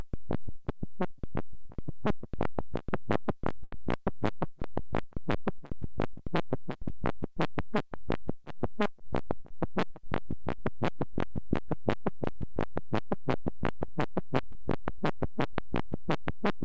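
At 3.64 s a packet arrived late, causing a short stall from a late packet: the jitter buffer ran dry and the last sound was stretched for about 82 ms, held too long with a slight buzz or dip, though nothing is lost. From 8.99 to 9.74 s a jitter buffer speed-up trims the excess backlog, cutting out small pitch-period slices totalling around 70 ms, so the everyday sounds run about 10% fast at unchanged pitch, hurried. Throughout, the call path's codec leaves nothing above 8 kHz.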